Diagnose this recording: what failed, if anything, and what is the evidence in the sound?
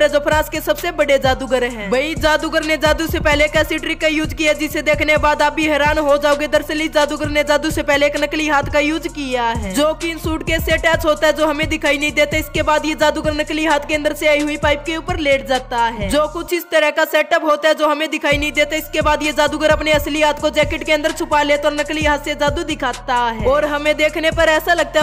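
Nothing failed that I can hear, so there's no stage to point at and no evidence of a fault anywhere in the sound.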